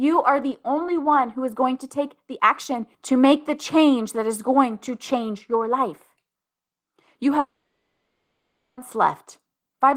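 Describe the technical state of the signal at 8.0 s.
A long network dropout, likely a stalled stream, runs from 7.39 to 8.80 s; at 8.0 s the concealment has faded to silence, and about 1.4 s of speech is lost.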